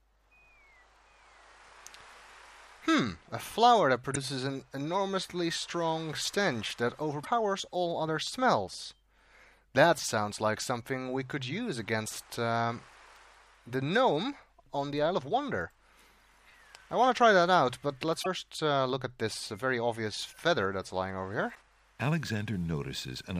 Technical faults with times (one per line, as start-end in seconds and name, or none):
4.12-4.17 damaged data in a compressed stream
7.20-7.27 damaged data in a compressed stream
18.20-18.27 damaged data in a compressed stream
21.51-21.57 damaged data in a compressed stream